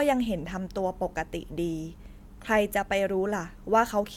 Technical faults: none

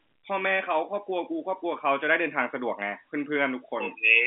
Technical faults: none

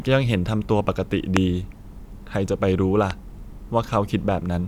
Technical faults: loud pop

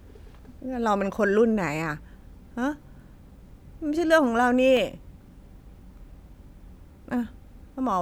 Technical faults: CD scratch ticks

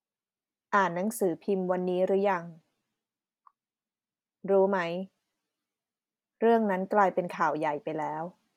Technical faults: none

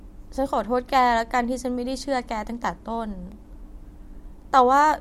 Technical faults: block of digital silence

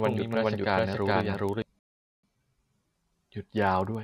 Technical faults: filter restarted on every block; doubled audio track; rebuffering stall

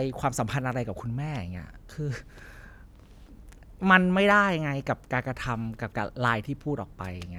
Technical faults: none

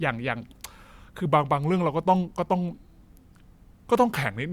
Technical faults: section at the wrong speed

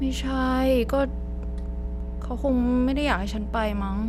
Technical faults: mains hum

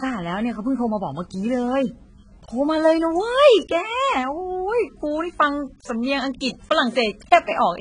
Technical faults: AAC compression

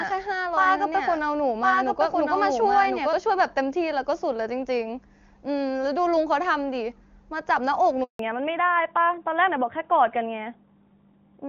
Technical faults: doubled audio track; handover gap; fallback to narrowband

